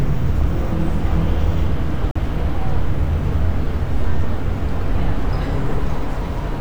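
A short recording of sound with a digital broadcast dropout: the audio mutes abruptly from 2.11 to 2.20 s, then picks up further along. That fits the receiver losing a single frame, about 43 ms of programme that's simply gone, and muting until clean frames arrive.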